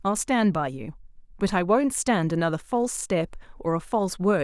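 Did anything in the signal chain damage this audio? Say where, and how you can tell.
No, nothing in the chain audibly damaged this speech recording, which shows no dropouts, clipping, distortion or other disturbance at any stage from capture to playback.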